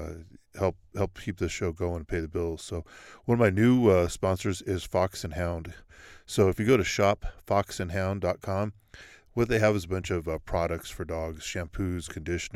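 Listening to the speech from beginning to end, nothing stood out as a technical fault.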